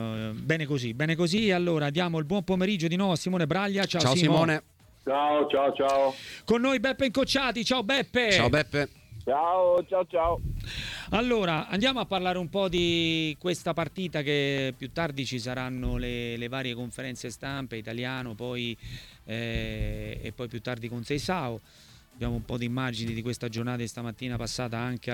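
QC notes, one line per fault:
0.18–24.79 s, clock drift buffer slips: a click every 0.6 s, around forty in all. Likely two devices on separate clocks several hundred ppm apart, so the buffer between them drifts until a block of about fifteen samples is dropped or repeated.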